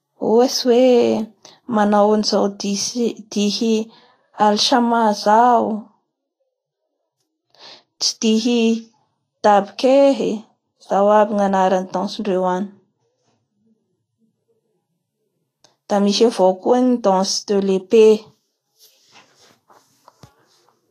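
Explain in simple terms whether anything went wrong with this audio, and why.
The whole clip carries plainly audible lossy-compression damage, likely Vorbis compression: nothing sounds above about 14.1 kHz, and the treble turns hissy and grainy. Unlike steady background hiss, this grain follows the speech itself, appearing where the sound has detail.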